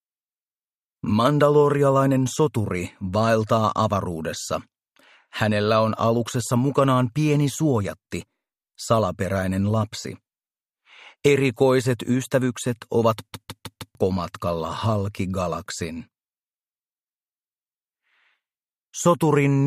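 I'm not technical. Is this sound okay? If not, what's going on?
No. From 13.33 to 13.95 s the sound gets stuck like a skipping CD. This is a CD stuck on one turn. A tiny slice, about 0.16 s long, plays four times in a row. Each repeat has a brief silent gap, giving a quick, even stutter.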